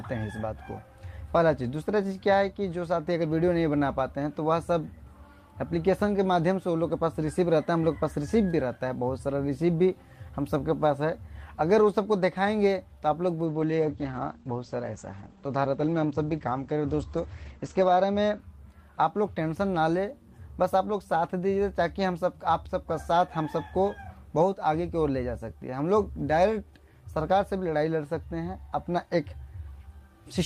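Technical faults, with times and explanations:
13.46–18.45 s: call bitrate drop. The call's bandwidth estimate fell and the encoder was starved of bits, which fits a fall from about 32 to 11 kbps, held lowest for 4.57 s. Coarser coding roughens the sound, and the top end is cut from 20 kHz to 8 kHz, leaving it muffled until recovery.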